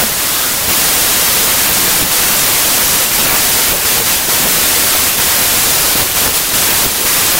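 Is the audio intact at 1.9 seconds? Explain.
No, at 1.9 seconds the speech sits under a wrong sample width fault that runs through the whole clip. The audio looks like it was written as packed 24-bit samples and read back as 16-bit, so the bytes get regrouped across sample boundaries. Only some of the resulting values carry the real signal's top bits, and the rest turn into harsh noise. The speech comes through buried, and it plays at about two-thirds speed, so it's slowed and pitched down.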